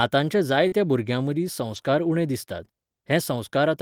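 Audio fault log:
0.67–0.74 s, short concealed packet loss: about 40 ms of the call failed to reach the decoder in time, so the receiver extended the preceding sound to cover the gap and then blended back in, leaving a brief smear just before "भुरग्यां मदीं".
1.72–1.78 s, lost packet rebuilt from error correction: audio between "भुरग्यां मदीं" and "उणे दिसतात" was lost in transit, likely two packets, and about 40 ms was rebuilt from the low-bitrate backup copies in the following packets, so nothing drops out but it sounds rougher and noisier.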